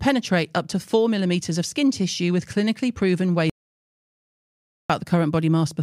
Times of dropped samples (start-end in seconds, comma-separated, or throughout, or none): none